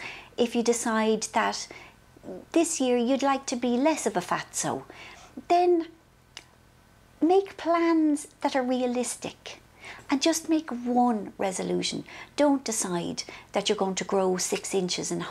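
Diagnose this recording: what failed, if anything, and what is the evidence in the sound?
Nothing in the recording points to a failure at any stage of the chain. No event in the sound calls for a diagnosis.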